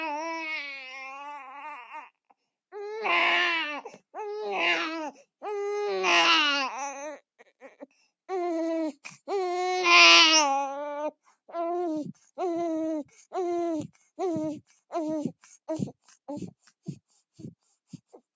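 A recording of sounds passed through call microphone processing, with nothing above 8 kHz, shows sound cut by the noise suppressor between 7.39 and 8.06 s. The suppressor mistook part of a sound for noise and pulled it down by as much as about 14 dB over roughly a third of a second in total. On a waveform the envelope sags or its tail ends abruptly, and a spectrogram shows the band energy thinning into dark gaps.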